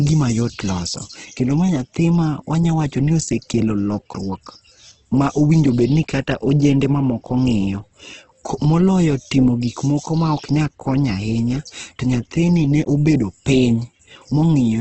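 From start to end, the speech sounds grainy, rough and hissy. Nothing is heard above 8.2 kHz, so the top is dull. Sibilants and vowels carry a noisy texture instead of clean detail. The damage is heavy and steady. This is likely Opus compression in its music-style CELT mode at a very low rate, which fits a bitrate around 12 kbps. Short of bits, the encoder fills bands with noise or copied content, and that produces the grain.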